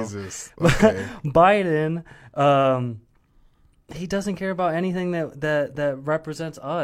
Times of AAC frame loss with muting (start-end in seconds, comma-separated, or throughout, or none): none